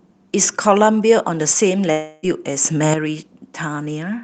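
At 1.91 s the sound suddenly smears into a fading buzzy continuation of itself, lasting about 0.3 s until 2.26 s, and then it picks up further on with a chunk missing. That's a long network dropout, likely with the receiver concealing the gap by stretching out the last sound it had. At 2.65 s everything, sound and background noise alike, steps up by about 8 dB at once with no fade, and stays there until 2.94 s. That's a sudden gain jump, likely a digital gain change applied between one sample and the next without a ramp, and the Opus call coding, with its top end cut off around 8 kHz, carries straight through it.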